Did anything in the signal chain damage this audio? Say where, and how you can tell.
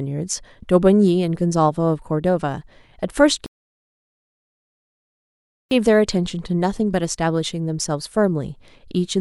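Yes, a rebuffering stall at the playback stage. From 3.46 s to 5.71 s the speech stops dead into silence for about 2.25 s, then picks up exactly where it broke off, with nothing skipped. The player drained its download buffer and waited for more data before continuing, so time was added rather than audio lost. On a waveform this shows as a flat gap; on a spectrogram, a blank vertical band with intact speech on either side.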